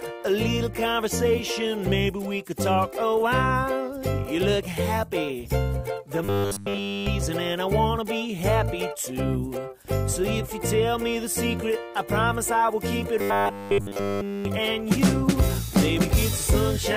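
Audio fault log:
6.25–7.07 s and 13.19–14.45 s: robotic sound from repeated short buffers. The sound becomes a rigid 100 Hz buzz, likely from one 10 ms chunk repeating in place of nearly all real audio.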